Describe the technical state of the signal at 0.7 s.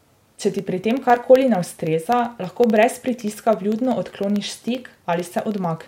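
At 0.7 s the speech carries periodic USB or driver dropouts, running from 0.08 to 5.77 s: tiny silent gaps of roughly a tenth of a millisecond every 64 ms, heard as regular ticks.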